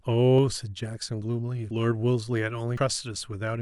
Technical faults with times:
0.38 dropped buffer (overrun)
1.71 dropped buffer (overrun)
2.77 dropped buffer (overrun)

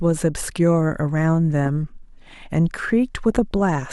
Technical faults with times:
3.32-3.61 DAB burbling

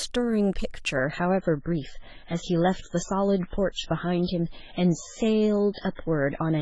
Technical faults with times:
0.96-6.61 adaptive stream at a lower bitrate

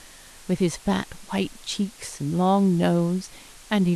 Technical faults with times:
0.00-3.95 low bit depth with dither

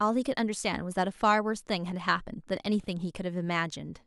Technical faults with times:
none

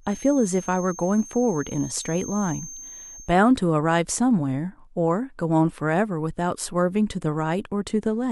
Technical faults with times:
0.00-3.36 feedback whistle

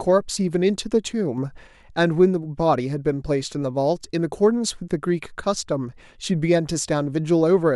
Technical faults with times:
1.38-1.67 sudden gain jump

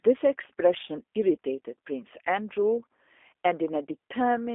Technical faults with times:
0.00-4.55 G.729 codec

